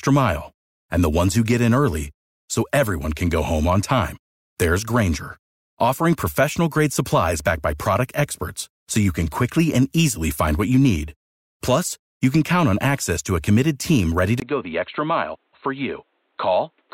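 Right after "a committed team ready", at 14.4 s, there's a 20 ms gap and the speech turns dull and boxy, with nothing above 4.2 kHz, a few dB quieter and carrying a new noise floor. That's likely the input switched to a poorer device, through to the end.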